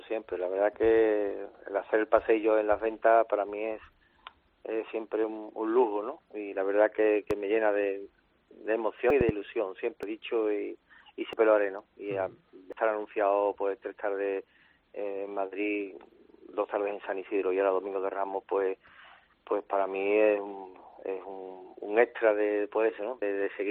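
A voltage step or pulse, likely from a plug, switch or static discharge, reaches the signal twice as a loud pop: a single one at 7.31–7.33 s about 10 dB above the audio, then a double pop at 9.21–9.31 s about 15 dB above it, with the audio continuing underneath both. Separately, the recording software likely failed to collect samples before the hardware overwrote them, producing dropped buffers (overruns) at 9.10, 10.03, 11.33, 12.73 and 23.22 s. Each is a jump ahead in the sound, with roughly a tenth of a second missing, and about three tenths at 10.03 s.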